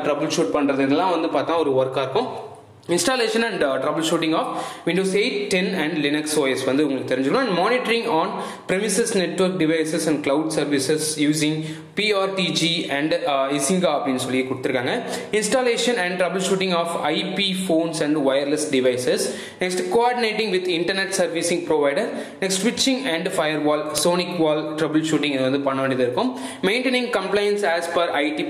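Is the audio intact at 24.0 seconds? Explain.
No. At 23.98 s a file header is played as audio: header bytes left at a joined piece's start are read as samples, giving a sharp, loud click. The waveform shows a brief spike, and the spectrogram a thin vertical broadband line.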